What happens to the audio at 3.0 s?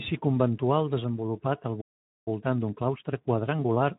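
The speech sounds hurried but keeps its normal pitch. This is time-compressed catch-up, running from 2.28 s, just after "conventual desenvolupat al", to the end. After a stall, the player trims small pieces and cross-fades the joins, playing about 1.15 times faster.

Underneath, the speech is plainly hoarse and noisy, and anything above 8 kHz is only a shaped, noise-like fill. That is Speex codec damage, which fits a low setting around 11 kbps. The codec has too few bits to rebuild the excitation cleanly.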